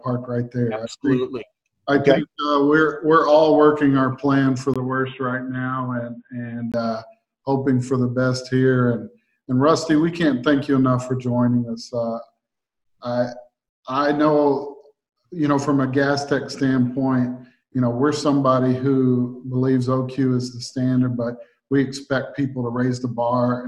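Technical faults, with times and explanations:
4.74 to 6.74 s, input switched to a poorer device: after a 20 ms gap the sound turns dull and boxy, with nothing above 3.8 kHz, a little quieter, over faint new background noise, until it clears. Likely the input moved to a narrower-band microphone or headset.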